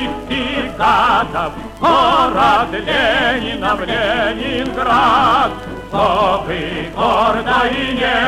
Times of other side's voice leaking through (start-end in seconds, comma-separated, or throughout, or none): none